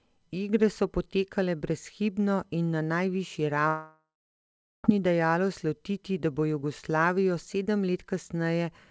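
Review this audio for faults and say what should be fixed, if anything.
From 3.68 s to 4.86 s the speech gives way to a stretched buzz that decays, then about 0.77 s of silence, and resumes with about 1.16 s of audio gone. That pattern is likely a long network dropout, where the receiver extends the last sound until it runs out and then falls quiet. A brief packet loss would leave only a short smeared blip with no gap. The G.722 call path cuts everything above 8 kHz. Prevent it by stabilising the network link or adding forward error correction and redundancy to the stream.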